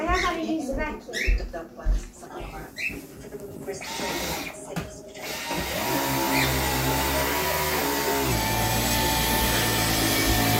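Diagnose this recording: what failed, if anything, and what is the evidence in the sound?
Likely a playback clock mismatch: a section at the wrong speed, 2.26 to 8.32 s, plays 1.12 times fast, so pitch rises about two semitones.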